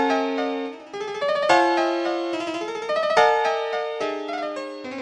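For the whole clip, the audio plays about 1.38 times too fast and about 5.5 semitones too high. This is a wrong sample rate fault. The samples are read out faster than they were captured, with no conversion, consistent with 16 kHz material played at 22 kHz.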